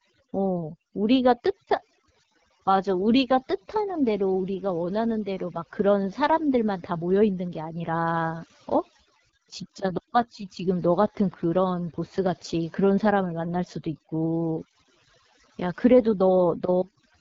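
Speech clip with two faults present throughout. Overdone noise removal has pulled frequency bands near the noise estimate far down, leaving a lowered background that breaks up into twinkling specks. The AMR wideband (HD Voice) codec runs at a low rate, one which points to about 8.85 kbit/s, making the speech plainly rough and raspy, with nothing above 7.6 kHz.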